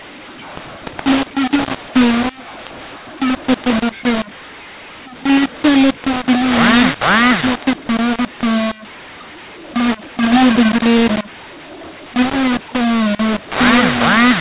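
From start to finish the speech carries a mu-law and A-law mix-up: samples written with mu-law are read back as A-law. Because the two logarithmic curves assign different levels to the same 8-bit codes, amplitudes are remapped unevenly, some pushed up, others pulled down, and the quietest codes land well above silence. The result is harsh, gritty distortion on the speech and a noise floor filling the pauses, all within the narrow 4 kHz telephone band.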